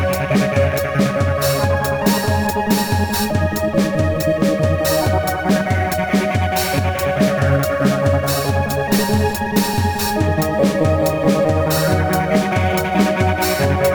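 Crude rate conversion runs throughout. Samples are repeated without filtering, which fits a 44.1 kHz to 48 kHz change. The error is only roughly 20 dB down, adding gritty inharmonic fizz on loud, bright passages.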